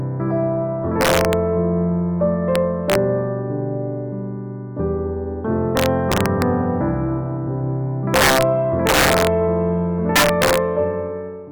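Integer overflow cracks at 1.01–1.33, 2.56–2.95, 5.77–6.42, 8.14–8.43, 8.87–9.27 and 10.16–10.58 s. Peaks overdriven by about 1 to 6 dB wrap to the opposite sign, giving violent cracks.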